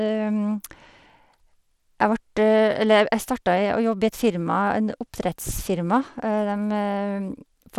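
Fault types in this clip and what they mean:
Bluetooth SBC compression: The speech carries a gritty, grainy edge all the way through, with nothing at all above 17.4 kHz. That fits a coarse sub-band coder starving its top bands, most likely SBC at a low bitrate around 96 kbps.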